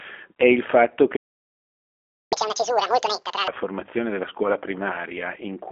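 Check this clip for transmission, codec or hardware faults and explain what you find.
Two linked playback faults are present, both in the player rather than the codec or hardware.

Playback stall, 1.16 to 2.33 s: the player likely ran short of buffered data or had its output thread held up. Right after "è il fatto" the speech cuts off and the output stays silent for about 1.15 s before resuming.

Catch-up at higher speed, 2.33 to 3.48 s: to recover the lost time, the player resamples its queued backlog at double speed. The speech after the gap comes out twice as fast and around ten semitones higher, then returns to normal by "formazione della scuola".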